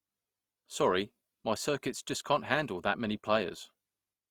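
From start to end the speech carries plainly audible Opus compression, likely from its CELT music mode at a rate that sounds close to 24 kbps. Band energies hold and the bandwidth stays wide, but thinly coded bands are filled with folded or noise content, so tones turn grainy and rough.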